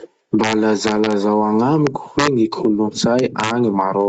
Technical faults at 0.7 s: gain pumping; integer overflow

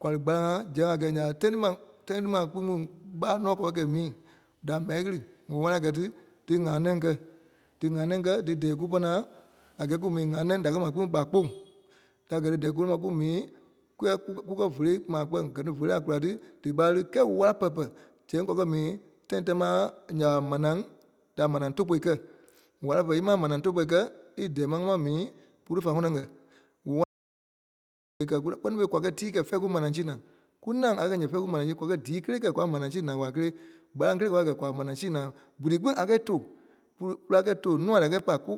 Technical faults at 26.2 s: short concealed packet loss

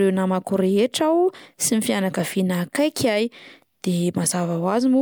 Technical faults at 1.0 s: none

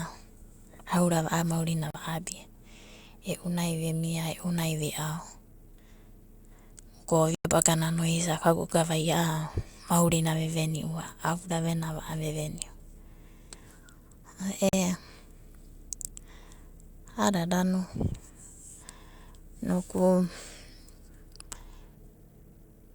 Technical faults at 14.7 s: Bluetooth dropout

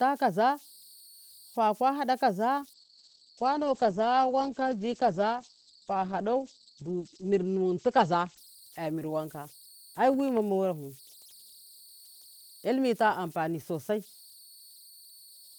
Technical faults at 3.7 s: converter idle tones; call bitrate drop

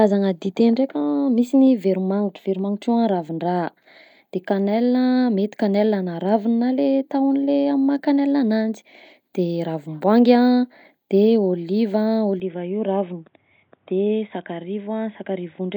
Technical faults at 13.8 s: input switched to a poorer device

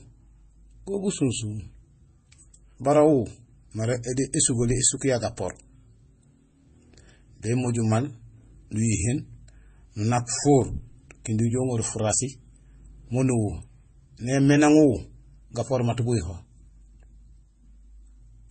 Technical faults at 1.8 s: transcoding between lossy codecs

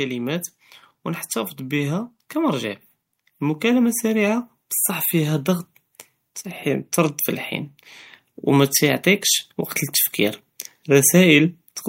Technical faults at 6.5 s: none

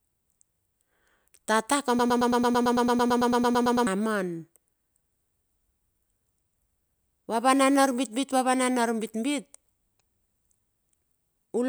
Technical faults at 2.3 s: broken-record loop

